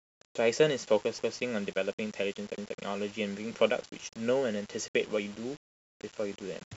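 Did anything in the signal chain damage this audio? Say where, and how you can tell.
Yes. Throughout the speech there is a grainy, rasping distortion that rides on the signal itself, sitting roughly 25 dB below it and getting coarser on quieter passages rather than forming a steady hiss. That signal-following grit is the signature of low bit depth without dither, which fits about 6 bits with plain rounding. The likely cause is a sample-format conversion stage that reduced the word length without adding dither, so the quantisation error stays correlated with the speech.

There are also two stutters where repeated frames occur, from 1.19 to 1.37 s and from 2.58 to 2.77 s. In each, a block of about 186 ms plays, then plays again immediately. Each event fits two compressed frames being written or delivered twice, in storage or on the network, so the decoder replays them. Each repeat adds about 186 ms, making the clip roughly 0.37 s longer than the original.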